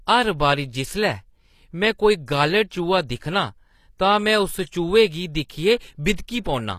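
Throughout the speech, the treble sounds synthetic and gritty, with s sounds turning lispy and nothing above 14.9 kHz, damage that likely points to HE-AAC compression at a low bitrate around 24 kbps. Band replication rebuilds the top end instead of coding it. At 6.44 s, pre-echo puts a brief hiss of about 17 ms ahead of an attack. The block's quantisation noise spreads backwards into the quiet moment before it and softens the onset.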